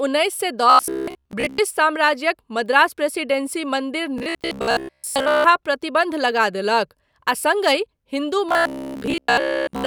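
After "उन्नैस सए", 0.70–1.58 s, then 4.18–5.46 s before "प्रतिबन्ध लगा", and 8.49 s to the end, speech becomes a rigid metallic buzz at 66.8 Hz with most of the audio skipped. This is robotic sound, likely from repeated buffers of about 15 ms. The steady pitch, rather than gaps, sets it apart from plain dropouts.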